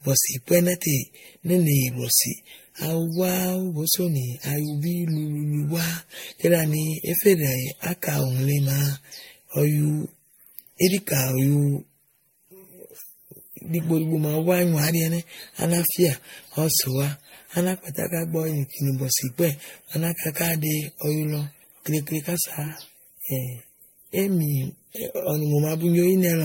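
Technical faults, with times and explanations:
throughout: generation loss. The speech was likely re-encoded with MP3 about five times, each pass requantising on a shifted frame grid so noise and spectral holes pile up. It sounds swirly, hollow and smeared, with blurred attacks and nothing above 16.6 kHz.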